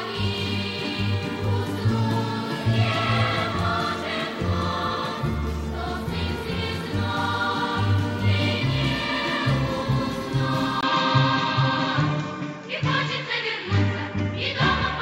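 At 10.81 s the sound drops out for about 20 ms, and from there to the end the band stops at about 7.6 kHz, so the top end turns dull and boxy. The level stays roughly the same, but a new, faint background noise appears, about 45 dB below the signal. This is likely an input switched to a poorer device, whose narrower band, different tone and own noise floor replace the original pickup mid-recording.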